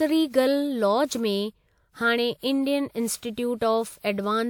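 From start to finish the speech has a swirly, smeared quality, hollower than a single 128 kbit/s encode would leave it, with consonant attacks softened and blurred, and nothing above 20.1 kHz. This is generation loss, most likely from the audio going through a WMA-style lossy codec around four times. Each decode and re-encode quantised the signal again on a shifted frame grid, so the noise from every pass stacked up.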